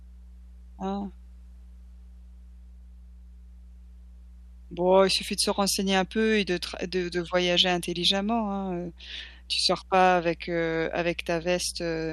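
Mains hum runs through the whole speech clip, from start to finish. It is a steady low tone at 60 Hz. Power-line current has leaked into the signal path, most plausibly through a ground loop or a transformer close to the wiring. The hum sits about 20 dB below the speech. That makes it plainly audible. It drones under every phrase and fills each pause with a constant buzz that never changes in pitch or level.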